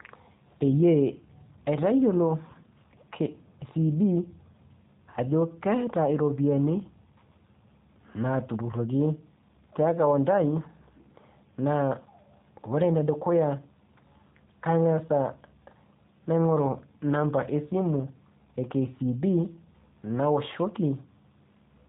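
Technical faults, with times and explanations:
Throughout, G.729 codec: the speech has a rough, slightly synthetic quality and nothing above about 3.8 kHz, which points to an 8 kbit/s VoIP codec rebuilding each frame from a vocal tract filter, pitch predictor and sparse pulses. Unlike a plain low-pass, the buzzy, artificial texture gives it away.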